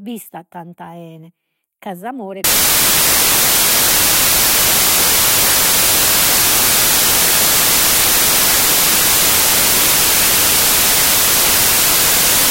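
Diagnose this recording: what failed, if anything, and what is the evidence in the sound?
The sample-format conversion failed: from 2.44 s to the end, samples were built from the wrong bytes, with byte order or alignment misread. The noisy low bits became each value's large part, so the speech turns into loud, harsh noise, close to white on the louder sounds.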